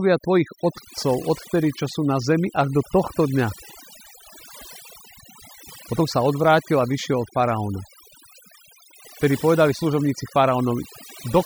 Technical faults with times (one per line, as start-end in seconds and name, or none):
0.00-11.46 overdone noise removal